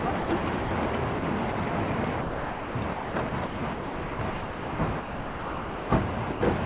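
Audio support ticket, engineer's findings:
Sound dropped by voice detector: short gaps filled with steady noise at 0.20–0.29, 0.65–0.71, 1.19–1.22, 1.52–1.55 and 6.32–6.41 s (30–90 ms). The sender's VAD likely judged quiet bits as background, and the receiver played comfort noise instead.

Sound chopped by voice detector: 2.21–5.9 s is choppy, with close to 2.8 s of it swapped for comfort noise. Likely VAD toggling send/no-send repeatedly through the stretch.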